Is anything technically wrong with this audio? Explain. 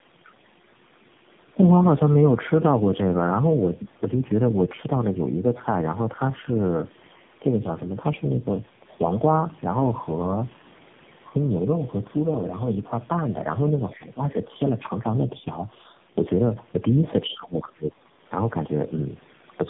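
Yes. Throughout the speech there is tandem speech coding: the sound fits three low-rate coders in series, likely GSM full rate and AMR-NB. Each recodes the previous one's errors, so the speech is rough, muffled and warbly, with nothing above 3.7 kHz.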